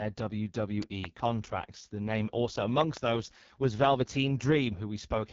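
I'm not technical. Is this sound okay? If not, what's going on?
No. Throughout, the speech sounds rough, raspy and slightly muffled, with nothing above about 7.4 kHz. That is the AMR wideband (HD Voice) codec, the phone-call squeezing system, working at one of its lowest settings, where it can't rebuild the voice cleanly.

Between 2.81 and 2.99 s there's a loud pop, two sharp clicks much louder than the speech, which carries on underneath. This is likely a sudden electrical jolt, from a plug, switch or static, getting into the signal.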